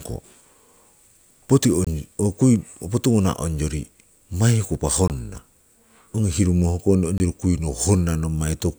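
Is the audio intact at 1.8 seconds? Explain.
No. A block of digital silence spans 1.85 to 1.87 s, which fits an unfilled 1024-sample buffer. The speech cuts abruptly to silence.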